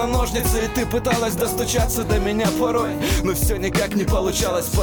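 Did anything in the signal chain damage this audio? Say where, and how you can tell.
Yes: a single sharp click at 3.28 s points to dropped samples, likely a driver or buffer slip skipping a fraction of a millisecond. No audible gap, unlike a dropout.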